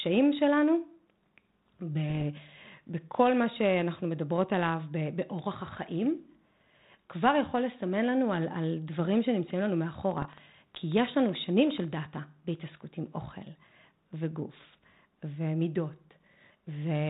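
Speech carried over what sounds like a G.726 ADPCM link. The band stops at 4 kHz and the light coding texture fits a 32 kbit/s DECT-style connection. Against that, there are three bursts of bit errors on the ADPCM link, at 2.09 to 2.25 s, 5.77 to 5.82 s and 10.22 to 10.26 s. Each brings pops and a rough burst with brief changes in level. The roughness comes from the decoder: a flipped bit throws off its step size and predictor, so the damage keeps ringing for a few milliseconds after the error itself. The error rate points to something around a fifth of a percent or a little less. From 10.11 to 12.06 s there's also a train of clicks, about fifteen of them at roughly 8.3 per second. They're spaced unevenly, are similar in shape, and poke around 5 dB above the speech. The third error burst lands inside this stretch. The likely source is interference from nearby gear or a dodgy connection or power supply injecting pulses.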